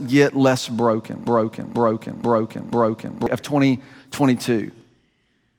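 From 1.27 s to 3.26 s the speech falls into a broken-record loop: a 0.49 s fragment repeats exactly, four times back to back, likely because the stream stalled and resent its last buffer. The audio that should have followed is lost. A spectrogram and waveform show identical repeating blocks.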